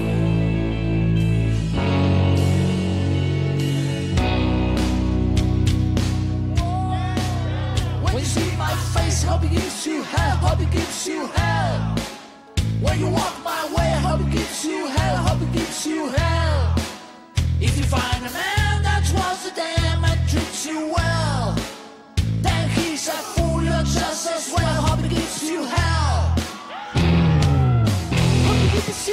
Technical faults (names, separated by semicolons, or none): none